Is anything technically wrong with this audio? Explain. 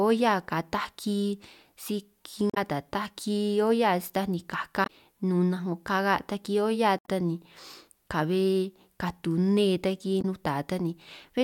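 Yes. Damaged data in the compressed stream makes the decoder misread frames and lose sync, leaving brief chirps, clicks or short holes at 2.50–2.58 s, 4.83–4.90 s (after "olla taj ni"), 6.97–7.08 s (between "taki olla" and "ta ni") and 10.18–10.25 s (after "katu nne").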